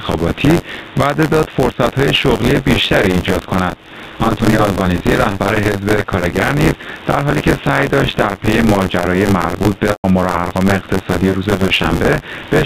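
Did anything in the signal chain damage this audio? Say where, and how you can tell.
Yes. Input gain, likely set far too high and driving a fast limiter, pulls the level down by about 15 dB on every loud sound throughout, so dynamics sound squashed.

At the driver or buffer stage, writer and hardware pointer have slipped, so about a fifth of each buffer replays audio about 20 ms old. This gives a continuous 93.8 Hz buzz whenever sound is present, which fits a 512-sample buffer.

On the network, packet loss with pitch repetition occurs at 6.84 s, where a 20 ms gap is bridged by a briefly held, buzzy tone, and at 9.90 to 10.04 s, where 140 ms fades to silence before cross-fading back.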